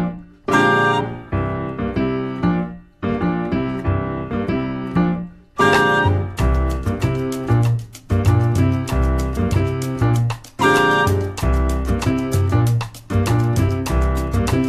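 Near the end, at 13.68 to 13.71 s, there's a case of compressed frames skipped: roughly 20 ms of audio just never plays, so the sound hops forward.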